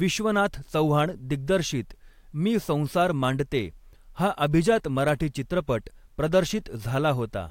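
A speech recording with one sharp snap laid over the sound at 5.09 s, a single brief crack that sits on top of the signal and peaks at around -20 dBFS. This is an electrical switching spike, likely from a nearby switch, motor or static discharge whose momentary arc was picked up by the audio line as a fast burst of interference.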